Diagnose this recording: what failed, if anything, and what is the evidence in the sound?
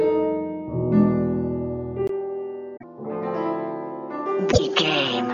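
Input switched to a poorer device at 2.07 s, at the capture stage. After a 20 ms gap, everything above 6.7 kHz disappears, the level drops by about 5 dB, and a faint new noise floor appears. This is likely a change to a narrower-band microphone or headset profile.

Damaged data in a compressed stream at 2.73 to 2.84 s and 4.48 to 4.59 s, at the codec or storage stage. Each is a brief blip, where the decoder hit corrupted frames, lost sync, and resumed at the next valid frame header.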